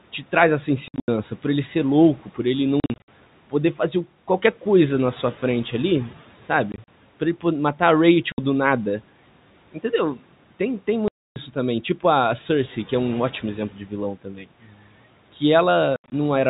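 A speech recording with packet loss filled with silence: hard-edged holes at 0.88 s (between "te traz essa" and "por ele ser"), 2.8 s, 6.72 s (after "na sua frente ali"), 8.32 s, 11.08 s and 15.96 s, sized like 20 ms packets. At 13.72 s, just after "é um ótimo exemplo", and again at 14.24 s, the noise suppressor cuts speech it takes for noise, dropping it by about 9 and 12 dB so it sounds swallowed. Room noise sits about 23 dB down, and the band-limited telephone sound fits G.711.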